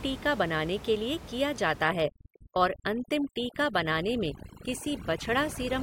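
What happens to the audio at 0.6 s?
At 0.6 s the audio is intact, with only the room's background noise sitting about 14 dB below the speech.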